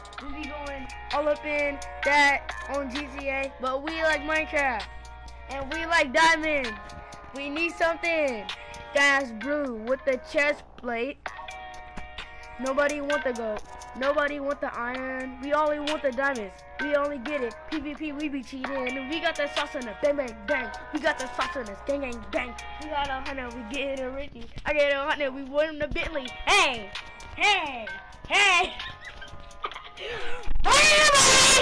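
No technical faults can be heard anywhere in this clip.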